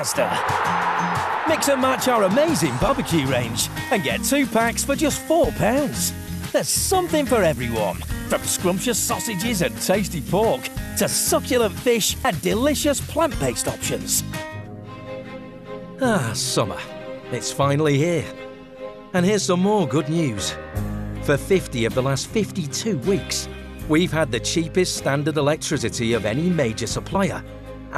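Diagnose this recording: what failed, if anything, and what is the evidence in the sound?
Codec stage, compressed frames skipped: at 2.88, 12.24 and 27.15 s the audio jumps ahead by about 50, 100 and 20 ms, which fits whole 24 ms frames being dropped.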